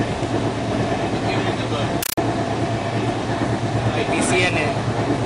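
From 2.03 to 2.18 s, a compressed stream is played as audio. The sound gives way to very loud, chattering static. Bursts of about 9 ms noise recur 31.25 times a second, with silence between. This fits an undecoded AC-3 bitstream, treated as samples.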